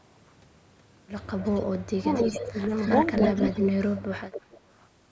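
An echo canceller on a loudspeaker end likely failed to remove all of what its microphone picked up, so an echo leak sends back a delayed copy of the speech, trailing it by about 0.27 s. From 1.38 to 1.65 s the copy is faint, about 15 dB below the speech. From 2.14 to 3.6 s it is much stronger, only about 5 dB down. From 3.96 to 4.61 s it drops back to about 15 dB down.

With both sides talking at once, the canceller likely could not separate its own talker from the returning echo and turned both down, which is speech suppressed in double talk. From 1.98 to 2.09 s the speech dips by roughly 20 dB for about a tenth of a second. From 2.45 to 2.7 s there is a shallower dip of around 10 dB. From 3.08 to 4.04 s it is deepest, falling roughly 30 dB over about half a second.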